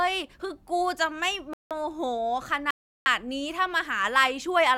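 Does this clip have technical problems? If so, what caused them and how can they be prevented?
Yes. The speech has two rebuffering stalls. The first runs from 1.53 to 1.71 s and adds about 0.17 s. The second runs from 2.71 to 3.06 s and adds about 0.35 s. Each time the sound drops to silence, then picks up exactly where it left off. Nothing is skipped. The player simply ran out of downloaded audio and waited for more. Keeping a larger playback buffer or using adaptive bitrate streaming would prevent these stalls.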